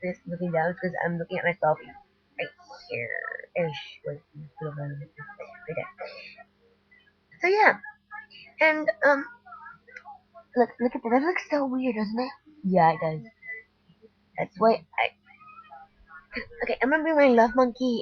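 At 6.44–7.35, 13.81–14.57, 15.12–15.34 and 15.86–16.06 s, sound is cut by the noise suppressor, which misreads it as noise and dips it about 11–12 dB.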